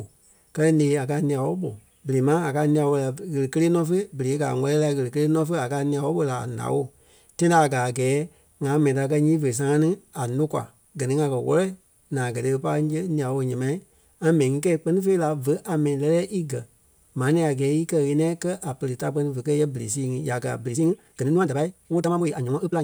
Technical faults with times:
20.66-22.83 time-stretched section

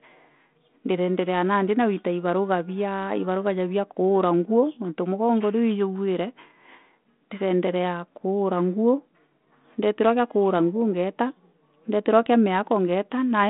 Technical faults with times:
none

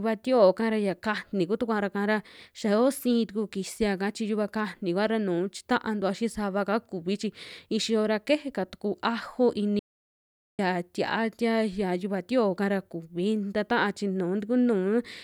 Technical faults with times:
9.79-10.59 audio dropout to silence

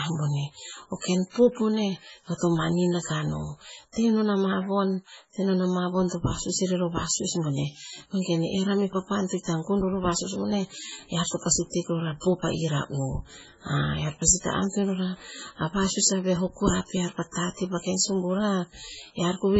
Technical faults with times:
0.00-19.59 low-bitrate audio saved at a high bitrate

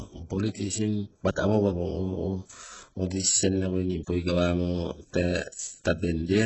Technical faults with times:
0.00-6.46 HE-AAC compression

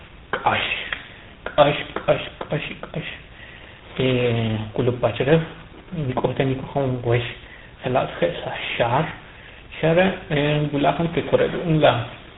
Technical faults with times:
0.00-12.38 tandem speech coding

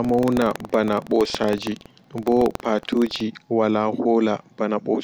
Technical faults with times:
0.00-3.23 buffer tearing

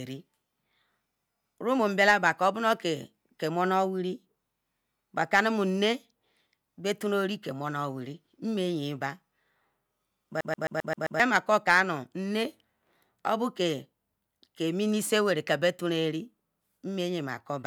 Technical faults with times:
10.41-11.20 CD stuck on one turn

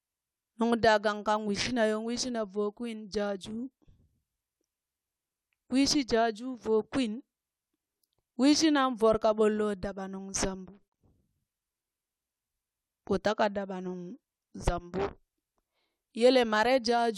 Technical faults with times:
none

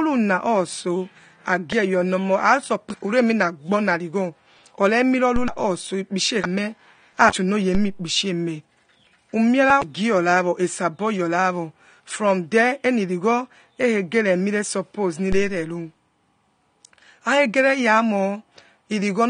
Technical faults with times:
0.00-19.30 AAC compression
5.36 DC step
7.75 DC step
15.32 DC step

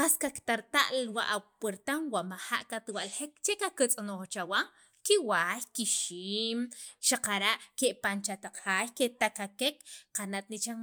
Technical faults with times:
none

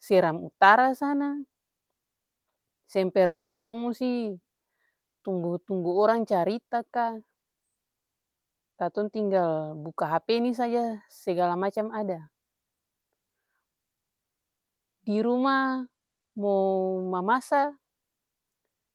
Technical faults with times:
3.25-3.76 long network dropout

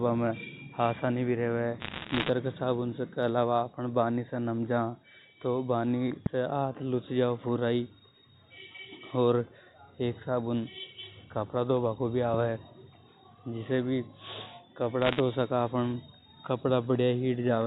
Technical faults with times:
1.80-2.30 bit errors on a digital phone line
6.26-6.28 loud pop
12.34-12.36 loud pop
15.02-15.20 bit errors on a digital phone line

